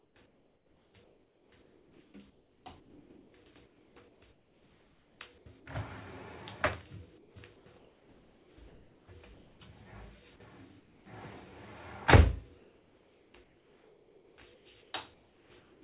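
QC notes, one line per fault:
0.0–3.34, 3.66–5.46, 7.18–9.08, 9.34–9.6, 10.8–11.06, 12.58–15.82 s: comfort noise in place of the background. The real background gives way to steady, featureless hiss that is about 1 dB louder at 9.34 s and about 4 dB quieter at 10.8 s. The likely cause is discontinuous transmission with receiver-side noise fill, audible within the call path's 4 kHz band limit.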